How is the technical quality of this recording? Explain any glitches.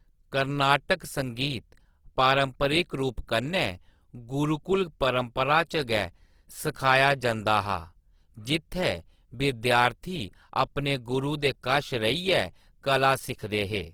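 Technical quality is held back by a single fault across the whole recording. Throughout, the speech sounds rough, grainy and noisy yet stays bright up to 20.2 kHz, likely Opus compression in music mode filling bit-starved bands with noise, which fits a 16 kbps rate.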